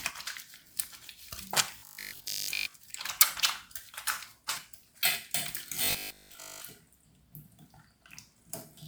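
From 1.78 to 2.74 s the sound goes robotic: a rigid metallic buzz at 50 Hz. That's likely from repeated short buffers, with audio arriving late and the player looping the last 20 ms or so, which covers most of that stretch and skips the real material.

Around 4.53 to 4.57 s there's a short blip from damaged data in the compressed stream. The decoder misreads the broken frames, loses sync and jumps ahead to the next clean one.

The robotic buzz returns from 5.85 to 6.65 s, again pinned at 50 Hz with likely the same buffer-repeat pattern filling in for the missing sound.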